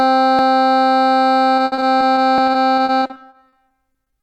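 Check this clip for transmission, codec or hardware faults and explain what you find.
The music has two kinds of fault: brief skips at two points and a long stretch of choppy, robotic-sounding loss toward the end.

At 0.39 s and again at 2.38 s there is a small forward jump in the music, with no gap of silence. The likely cause is a dropped buffer (overrun): the software did not read its samples before the hardware overwrote them, so a sliver of only a few milliseconds disappears and the surrounding audio is spliced directly together. Unlike packet loss, nothing is patched in. The sound simply skips ahead.

From 1.57 s to the end, repeated packet loss gives a choppy, robotic quality. About 20 separate holes occur. Each is filled by stretching the preceding sound, which adds about 510 ms of synthesized fill in total, while about 400 ms of the music itself is missing. The longest gap is 70 ms, and roughly a fifth of the stretch is concealment. 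The artificial continuation and its frequent recurrence set it apart from the clean, single splices of the overruns.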